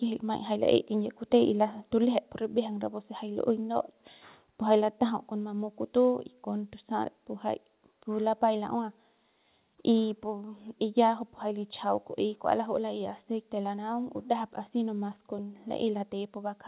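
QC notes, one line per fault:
0.69–0.76 s, microphone overload: The loudest peak here carries a brief harsh, crackly edge. The likely cause is an input level set too high, so the peaks ran about 1 dB past the converter's ceiling and a small fraction of samples were flattened. On the waveform the tops of those peaks are squared off flat. On the spectrogram the crackle appears as a vertical smear of added harmonics across the band, all below the 4 kHz ceiling of the telephone-band call path.
2.04 s and 5.10 s, microphone volume stepped down: At each point, voice and background drop together in a single step, by about 3 dB at 2.04 s and about 2 dB at 5.10 s. This sounds like the call software likely reacting to the earlier overload by lowering the device's input gain in discrete notches rather than gradually. On the waveform the envelope steps abruptly to a lower height. On the spectrogram the whole band, noise floor included, dims at once along a clean vertical edge.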